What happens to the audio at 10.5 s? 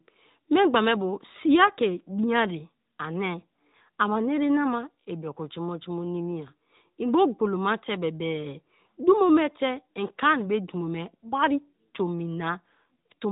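At 10.5 s the speech carries AMR narrowband mobile codec damage, present throughout the clip. Everything above 3.8 kHz is gone, and the vocal-tract model with sparse pulse excitation makes the voice plainly buzzy and synthetic. A simple low-pass filter would dull the sound without that coded buzz. The degree of damage fits a mid-rate mode around 10 kbps.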